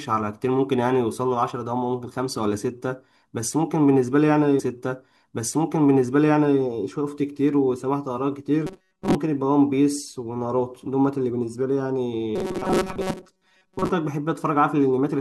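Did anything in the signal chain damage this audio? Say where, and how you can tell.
Yes. From 4.59 to 6.59 s the speech jumps back and about 2.0 s of it plays a second time, with a small blip where playback lands on the earlier point. That is a stream segment repeated at the network and playback stage: the player fetched or queued the same chunk of the stream twice, so the listener hears a stretch of the programme again instead of the material that should follow.

From 8.66 to 9.16 s, and again from 12.36 to 13.89 s, the speech turns into a rigid, metallic buzz at 188 Hz that still loosely tracks the speech. This is robotic sound from repeated short buffers, most likely at the driver or buffer stage. New audio arrived too slowly, so a slice of about 5.3 ms was looped to fill the gaps, and most of the real signal was skipped. That loop length sets the fixed 188 Hz pitch.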